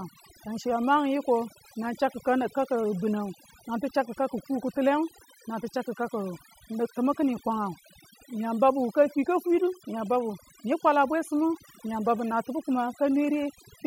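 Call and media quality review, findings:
Speech throughout; gaps between phrases near-silent with twinkling specks. Overdone noise removal: noise reduction set too aggressively, attenuating any band near its noise estimate, taking quiet speech detail and leaving isolated residual bands.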